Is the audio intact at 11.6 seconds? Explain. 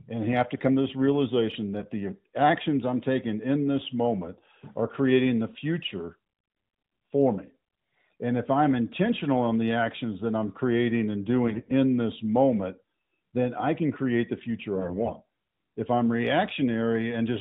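No. From 11.48 to 11.72 s there are AMR bit errors. About one bit in twenty of the weakly protected bits in the AMR narrowband frames arrives flipped, over a stretch that fits roughly a dozen 20 ms frames. The excitation pulses and the finer gain and spectral values land wrong, so the speech turns hoarse, scratchy and gargly. Unlike frame loss, there is no gap or smeared repeat, and pitch and level hold.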